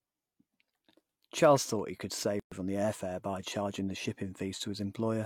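Two separately encoded pieces were joined at 2.40 s untrimmed, leaving the encoder's start-up delay and last-frame padding: a gap at a join of encoded pieces. After "thought he could", the speech stops for 121 ms, with smeared edges, then resumes with "on the air fare" at 2.52 s.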